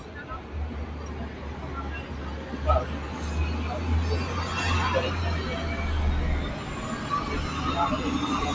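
Everyday sounds, with a noise suppressor applied to music or sounds running throughout. Built for speech, it treats steady tones and ambience as noise. Onsets pass, but sustained parts and tails dip by a few decibels, so the sound pumps and thins. The call's microphone processing leaves nothing above 8 kHz.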